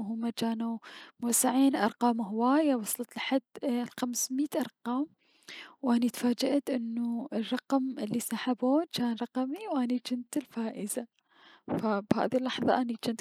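No technical faults can be heard in this recording.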